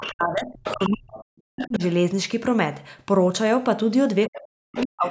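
From 0.0 to 1.82 s and again from 4.27 s to the end, speech suppressed in double talk: the talker's level dips sharply, by as much as about 40 dB, and breaks up, likely because the echo canceller turned down both sides at once. Within these stretches, the other side's voice leaking through appears at 0.0–0.13, 0.64–0.97, 1.57–1.85, 4.34–4.39 and 4.76–4.86 s as faint scraps about 10 to 20 dB below the speech, likely loudspeaker echo the canceller missed.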